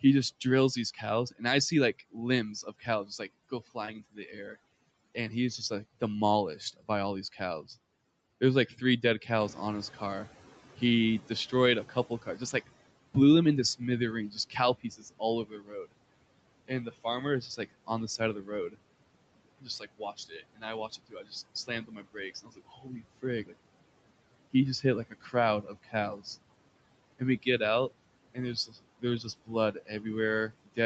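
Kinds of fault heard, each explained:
Overdone noise removal: The noise reduction is cranked too hard across the whole clip, so bands near its noise estimate get shut off along with quiet bits of speech. That leaves a lowered background full of little twinkly specks.
Speech cut by the noise suppressor: The suppressor mistakes parts of the speech for noise and pulls them down, by about 12 to 18 dB at worst. Soft consonants and word endings sound swallowed, between 10.77 and 23.54 s but also early on and near the end.
Short concealed packet loss: Around 3.85 s about 20 ms of audio never showed up in time, so the decoder patched the gap by stretching out the last sound and then blending back in. You get a tiny smear or wobble there.
Noise suppressor catching up: When the room noise jumps by about 10 dB around 9.5 s, the suppressor's estimate lags. The noise leaks through at first, then gets pushed down by about 15 dB as it adapts, which takes roughly 3.3 s, until about 12.7 s.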